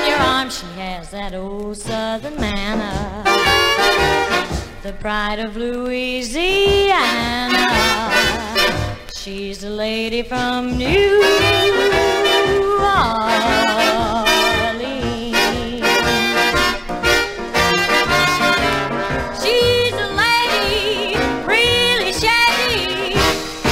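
From 9.72 to 12.32 s, mains buzz: 60 Hz switching spikes leak in, heard as faint, raspy buzzing, shown as stacked harmonic stripes reaching kilohertz.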